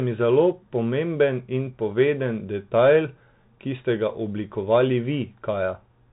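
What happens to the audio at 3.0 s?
At 3.0 s the speech carries the Bluetooth CVSD headset codec, present across the whole clip: a one-bit up-or-down coder with adaptive step size, consistent with 64 kbps. Unlike a plain narrowband filter, it adds a granular hiss, scratchy s sounds and slope-overload distortion on loud high sounds, with nothing passing above a cutoff near 4 kHz.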